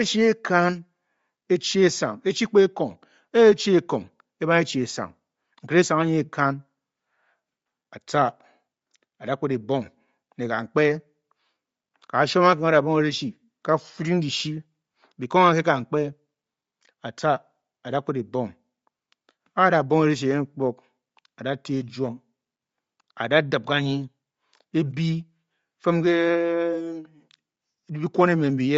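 The speech was likely squeezed through Bluetooth LC3 compression for its whole length, at a rate that fits about 32 kbps in 10 ms frames, so the upper spectrum is thinned and noise-filled, giving a plainly audible breathy, grainy edge to the speech throughout.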